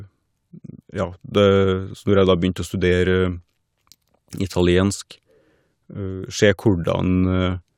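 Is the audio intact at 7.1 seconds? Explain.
Yes, the speech at 7.1 seconds plays through intact, with no dropout, click, distortion or other fault at that moment.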